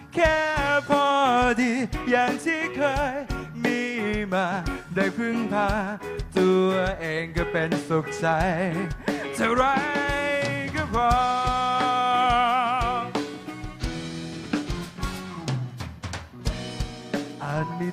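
From 13.48 s to 17.65 s a faint gritty, inharmonic fizz rides on the louder and brighter moments, roughly 40 dB down. This is crude rate conversion, consistent with a 44.1 kHz to 48 kHz change done by plain linear interpolation without filtering.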